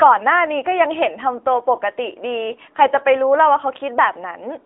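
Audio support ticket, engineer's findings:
AMR narrowband mobile codec throughout: thin, buzzy, synthetic speech; spectrogram shows a hard ceiling near 3.8 kHz, band roughly 300 Hz–3.6 kHz; damage level fits a 10.2 kbps AMR-NB mode.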